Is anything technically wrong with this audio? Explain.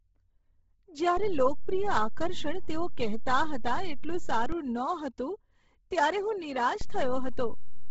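Yes, there are two faults in this speech.

Bluetooth LC3 compression is heard throughout, and it is the likely cause of the sound. Nothing remains above 7.8 kHz, and the upper band carries noise fill in place of real detail, so consonants and breaths take on a grainy, hissy edge. The damage is heavy, which fits a low bitrate of around 16 kbps with 10 ms frames. At that rate the codec discards most of the high spectrum and substitutes synthetic noise.

A DC step occurs at 1.17 s. The waveform's zero line jumps to a new offset, holds there, and steps back at 4.52 s. A second step at 6.81 s holds until the end. Each jump is a sudden shift of the whole signal away from zero, which a speaker cone reproduces as a single push. The steps are therefore heard as low thumps or clicks at 1.17, 4.52 and 6.81 s, while the speech continues unchanged.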